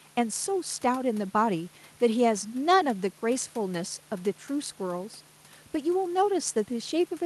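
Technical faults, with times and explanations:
No technical faults can be heard in this speech recording.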